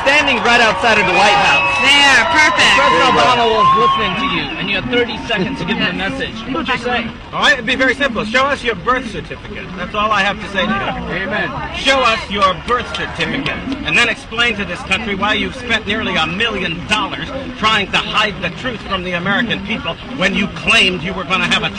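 At 6.51 to 6.56 s, compressed frames are skipped: a short run of frames never plays, so the audio jumps ahead by roughly a tenth of a second.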